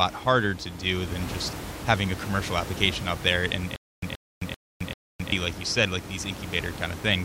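From 3.76 s to 5.32 s, the speech catches on a short burst of about 127 ms that plays four times, each followed by about 264 ms of dead digital silence, a steady cycle of roughly 391 ms. The room noise, sitting about 11 dB below the speech, drops out with it. This stutter with silent gaps most likely comes from a stalled player or stream that replayed its last fragment at each retry and then ran dry, so the audio due in that span never plays.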